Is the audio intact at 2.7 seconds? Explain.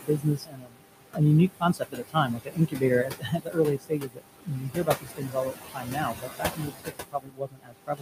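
No. At 2.7 seconds the sound falls inside a stretch of speech cut by the noise suppressor, running from 1.5 to 2.83 s. The suppressor mistook part of the speech for background and pulled it down with the noise, by about 21 dB at its deepest and over roughly a second in total. Soft consonants and word endings there sound swallowed or faint. On a spectrogram the weaker speech energy, especially high-frequency consonant detail, is missing in patches, and the waveform envelope dips below the surrounding speech.

The same moment also carries noise suppressor artifacts, present through the whole clip. The suppressor attenuates bands it judges to be steady noise, frame by frame, by about 21 dB, so the room noise (about 6 dB below the speech) sinks in the gaps and surges back under speech. A spectrogram shows the noise floor pumping with the speech and scattered isolated time-frequency specks of residual noise. 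The waveform's quiet sections look unnaturally clean next to its busier speech regions.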